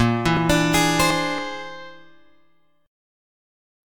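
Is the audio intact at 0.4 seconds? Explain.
No, right at 0.37 s the sound jumps ahead, skipping roughly ten milliseconds with no gap of silence. That's likely a dropped buffer (overrun): the samples got overwritten before being read, so the two sides were spliced together.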